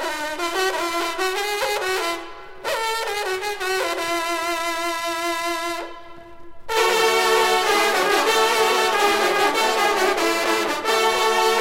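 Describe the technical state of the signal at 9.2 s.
At 9.2 s the signal is intact, with no technical fault present at that moment.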